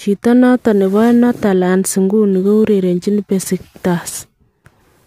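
At 2.33 s a crude rate conversion begins, and it lasts to the end. The sample rate was changed by picking the nearest sample, with no filtering. Some samples are simply dropped. The pattern fits a change from 48 kHz to 44.1 kHz. The resulting error repeats on a fixed cycle and produces shifted, inharmonic copies of the speech. It sits roughly 25 dB below the speech. It sounds like a gritty, inharmonic fizz riding on loud and bright sounds.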